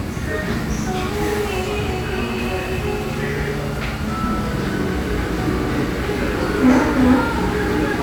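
Nothing stood out as a technical problem on listening to these everyday sounds.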